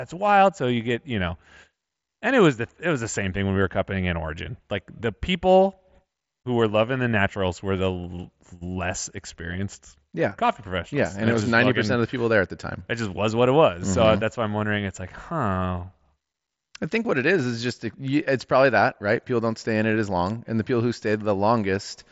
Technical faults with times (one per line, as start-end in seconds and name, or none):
none